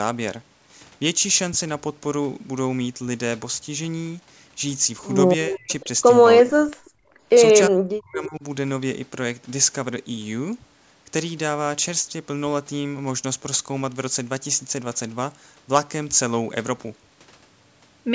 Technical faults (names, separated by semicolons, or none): speech suppressed in double talk; echo leak; background gated by the echo canceller